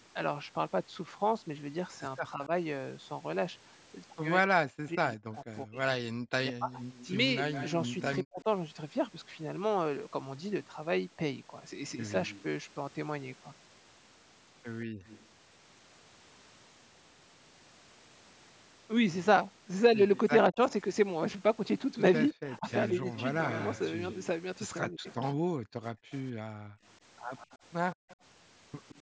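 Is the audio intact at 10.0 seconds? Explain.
Yes, the speech at 10.0 seconds is intact, with nothing beyond the ordinary call microphone processing, which keeps content below about 8 kHz.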